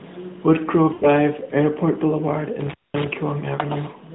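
From 0.94 to 1.1 s, lost AMR speech frames interrupt the speech. About 80 ms is missing, which fits four consecutive 20 ms frames failing their check. The decoder repeats the last good pitch and vocal tract settings at falling gain, so the sound smears, fades, then returns briefly weak or rough.

Between 2.61 and 3.07 s, an intermittent contact opens the line for about 0.21 s in total. The signal drops out with crackle at each break, and faint hiss remains while it is open. The narrowband AMR codec keeps everything below 4 kHz throughout.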